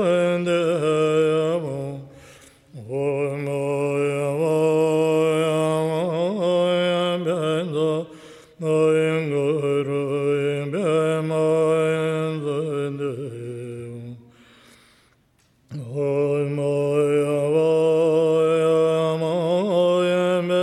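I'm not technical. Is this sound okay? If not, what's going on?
Yes, this sound is okay. Nothing in it points to a technical problem.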